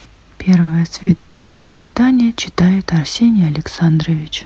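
Speech carried over a call link, with the top end rolled off around 8 kHz, which fits an Opus path at modest bitrate, and it hiccups twice early on before properly seizing up. The first two faults are short stalls from a late packet, at 0.63 to 0.77 s and 1.03 to 1.09 s. In each, the receiver's jitter buffer ran dry and it stretched the last bit of sound by about 40 ms until the packet turned up. Nothing gets dropped, but you hear a held, slightly buzzy smear, and each one pushes everything after it 40 ms later. Then comes a call audio freeze from 1.17 to 1.96 s. It starts with about 100 ms of extended sound and runs straight into a further 650 ms, so the last sound drags on as a fading buzz rather than dropping to silence. This is likely packets held up in transit. When they arrive, the speech picks up where it left off, with no content lost, just a long hole inserted and the rest of the clip shifted later.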